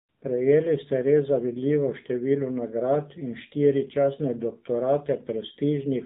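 AMR narrowband mobile codec damage runs through the whole clip. The speech has been squeezed through a 2G/3G-style speech coder that keeps nothing above 4 kHz, so sibilants and breath detail are gone and the voice sounds boxed-in and telephone-thin. The codec rebuilds each short frame from a vocal-tract model excited by only a few pulses, and here the result is plainly buzzy and synthetic, which fits a low mode around 7.4 kbps.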